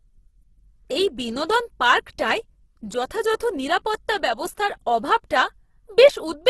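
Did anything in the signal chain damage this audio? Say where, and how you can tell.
Yes, at the codec stage, and the damage runs through the whole clip. The speech sounds grainy and rough, with a noisy texture rather than swirling or hollow gaps. Nothing survives above 12.1 kHz. Together this points to heavy Opus compression in its music mode, likely at a low rate of about 12 kbps. Starved bands are refilled with folded or noise-like energy instead of being left empty, which produces the grain.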